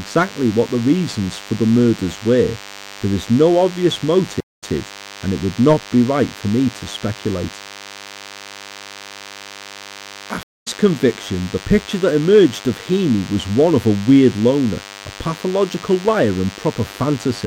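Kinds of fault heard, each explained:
DECT cordless phone buzz: a nearby DECT handset or base pulses its radio every 10 ms, and the audio circuitry rectifies those bursts, so under the speech there's a thin, steady 100 Hz buzz packed with harmonics, sitting roughly 20 dB below the voice the whole way through.
Stream reconnect: the connection drops, playback goes quiet, then a fresh decoder picks up mid-stream. It happens twice. At 4.40 s there's about 201 ms of silence and it comes back 131 ms earlier, repeating a bit. At 10.43 s it's 218 ms of silence, resuming roughly 200 ms later.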